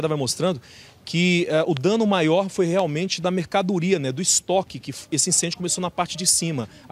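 A loud pop at 1.77 s and again at 2.79 s stands out around 10 dB above the sound, likely a voltage spike from a plug, switch or static.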